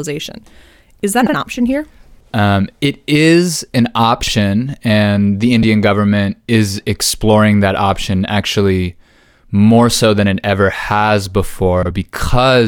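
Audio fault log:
1.21–1.34 s, 4.23–4.32 s, 5.63 s and 11.82–11.91 s: frames out of order. At each spot two neighbouring runs of frames got swapped and decoded in that order, so a short stretch plays with its two halves exchanged. You hear a quick garbled flutter. The swapped blocks are roughly 70, 36, 3 and 60 ms long, which fits runs of a few codec frames. They land just before "option here", between "it is an" and "and the", and right before "government is exploring that". No time goes missing.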